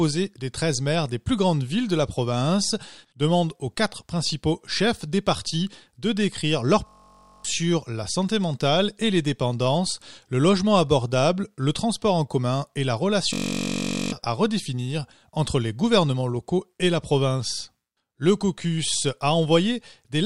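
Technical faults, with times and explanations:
6.87–7.45 s and 13.33–14.12 s, system hang loop. The playback froze while the sound hardware kept replaying one tiny piece of its buffer. The first follows "partis de décrire leur" and ends before "la santé mentale et". The second follows "en commun et la" and ends before "à redéfinir entre les". Each loop lasts 21.33 ms, which fits a 1024-sample buffer. Repeating 46.9 times a second, it sounds like a steady buzz. About half a second and then about 0.7 s of speech are lost.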